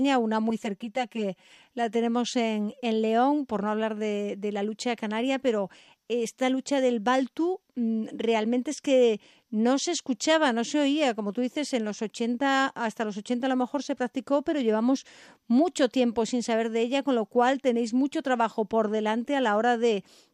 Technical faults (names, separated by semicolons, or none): channel delay (comb filtering)